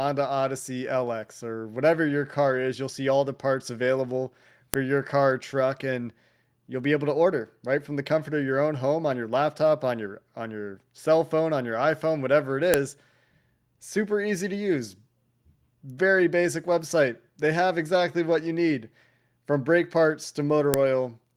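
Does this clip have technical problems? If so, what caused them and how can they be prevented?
Yes: a file header played as audio gives sharp snaps at 4.74, 12.74 and 20.74 s, exactly 8 s apart, unlike random dropout clicks. Stripping each piece's header before joining or streaming prevents it.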